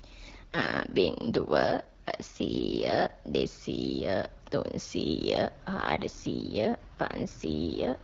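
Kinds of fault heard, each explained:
AMR rate drop: The AMR wideband link stepped down its codec rate, giving up coding bits in favour of error protection, which fits a fall from the 12.65 kbit/s mode to the 6.6 kbit/s mode. The speech turns rough, raspy and synthetic from 0.52 to 3.12 s and again from 5.73 s to the end, with no gap and no narrowing of the band. Between those stretches the speech returns to the clearer HD Voice sound.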